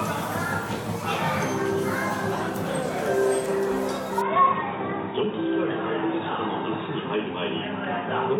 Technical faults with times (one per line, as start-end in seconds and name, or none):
4.21-8.39 input switched to a poorer device